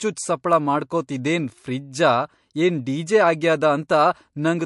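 Throughout the speech, MP3 compression damage is plainly audible: nothing survives above 11.2 kHz, and weak spectral detail flickers, giving a watery, swirly texture, likely from a bitrate near 55 kbps.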